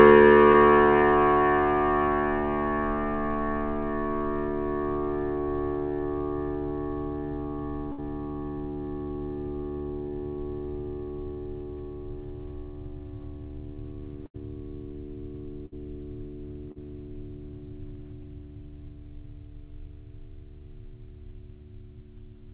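At 0.52 s, a short concealed packet loss leaves a brief smear in the music. About 20 ms of audio never reached the decoder in time, so the receiver extended the preceding sound to bridge the hole and then blended back into the real signal. A second, longer instance at 16.72 to 16.78 s fills about 40 ms the same way and is heard as a wobble rather than a clean cut.

A burst of packet loss first occurs at 7.92 to 8.00 s, with roughly 60 ms lost. Similar bursts follow at 14.26 to 14.36 s (80 ms) and 15.66 to 15.74 s (60 ms). In each case several consecutive packets were lost or arrived too late to play. The receiver continued the last sound while attenuating it, giving a held, fading tone, and playback then resumes further on with that stretch missing.

All of this sits on a call path band-limited to 4 kHz, which fits a G.711 mu-law codec at 64 kbps.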